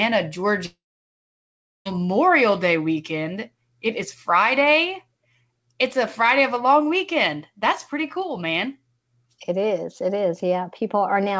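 Speech over a call path topped out at 8 kHz, as G.722 would give. From 0.66 to 1.87 s the sound trails off into a fading buzz and then near-silence, likely a long network dropout losing about 1.2 s.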